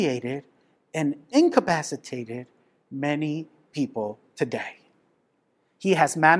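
No technical faults can be heard anywhere in this speech recording. Nothing in the signal chain stands out as having gone wrong at any point.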